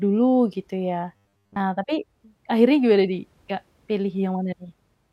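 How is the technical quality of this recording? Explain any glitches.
The recording has one glitch, between 1.16 and 1.60 s: robotic sound from repeated short buffers. New audio likely arrived too slowly, so playback looped a 10 ms slice over most of that stretch while real audio was skipped. The loop imposes a fixed 100 Hz pitch, turning the speech into a stiff metallic buzz that only loosely follows it.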